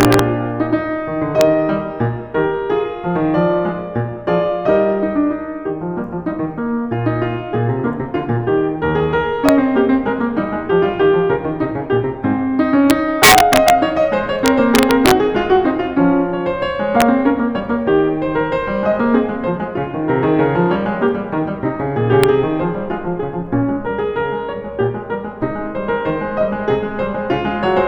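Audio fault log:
0.01–0.19 s, 1.41 s, 9.49 s, 12.90–13.70 s, 14.46–15.11 s, 17.01 s, 22.24 s: integer overflow. Loud music peaks exceed the largest integer by up to about 4 dB, worst at 12.90–13.70 s. Instead of being limited, the samples wrap to the opposite sign and jump across the full range. This produces violent cracks far harsher than clipping.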